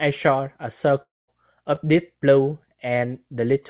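From 1.02 to 1.3 s the sound breaks off in a way that points to a long network dropout, likely caused by a stretch of packets that never arrived. The receiver keeps the last sound going as a fading buzz, then leaves about 200 ms of near silence before the audio resumes further on, with roughly a quarter of a second simply gone. Unlike a brief concealed loss, the gap is long enough to hear as an outright hole rather than a smear.

Between 1.76 and 1.79 s there is a short concealed packet loss: about 20 ms of audio failed to reach the decoder in time, and the receiver covered the hole by extending the preceding sound for a moment before blending back into the real signal. It comes across as a quick smear or wobble, which is what separates it from the dropout, where the patch runs out and leaves a true gap. Both events sit inside a narrowband call path with nothing above 4 kHz, which fits a 64 kbps G.711 connection.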